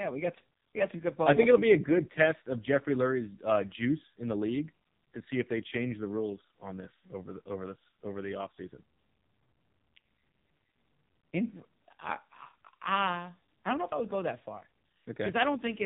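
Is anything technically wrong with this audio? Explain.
Yes. Throughout the clip the speech carries heavy AMR narrowband mobile codec damage. Nothing above about 3.8 kHz survives, so a spectrogram shows a flat ceiling with empty space above. The codec rebuilds speech from a vocal-tract model driven by a few pulses per 5 ms subframe. At a rate this starved, which fits AMR-NB's 5.9 kbps mode, the voice sounds buzzy, thin and synthetic.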